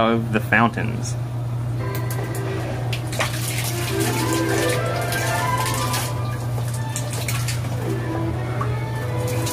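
No technical faults can be heard anywhere in the audio; the signal stays steady and intact throughout.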